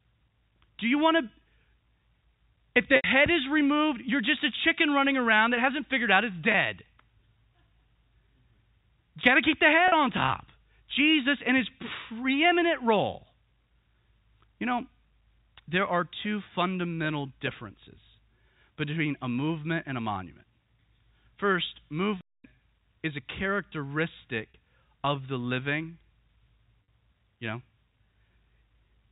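Speech over a G.711 telephone path, band-limited to 4 kHz, with two kinds of fault. Packet loss with pitch repetition: lost stretches were bridged by replaying the last pitch period, heard as a brief held, buzzy sound at 2.96–3.04 s (80 ms), 6.52–6.54 s after "hasn't figured out it's" (20 ms), 9.88–9.92 s between "got to keep the" and "on top", 24.50–24.54 s and 26.84–26.88 s (40 ms each). A playback stall at 22.21–22.44 s drops the sound to silence for about 233 ms before "is a", likely because the player ran out of data.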